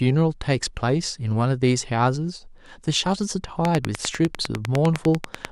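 Speech carrying a train of clicks from 3.65 s to 5.46 s: about twenty matching pulses, evenly spaced at 10 per second, standing well above the speech and present in pauses too. Their regular timing and near-identical shape, unlike random crackle, point to likely interference or a faulty connection or power supply.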